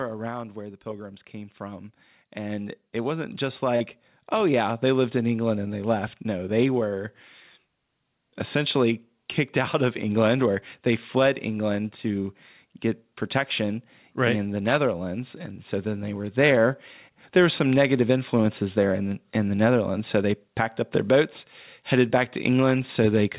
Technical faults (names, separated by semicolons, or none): automatic gain falling; automatic gain rising; short concealed packet loss